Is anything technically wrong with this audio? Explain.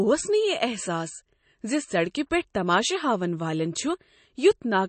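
Yes. Throughout the speech the sound is dull and watery, with a swirling, metallic quality on s sounds and softened consonant attacks. Nothing is present above about 8.3 kHz. This is likely MP3 compression. Short of bits, the encoder drops the treble at a fixed cut-off and zeroes weak frequency lines that flicker on and off between frames, which produces the swirl. The damage is plainly audible and points to a low bitrate of around 32 kbps.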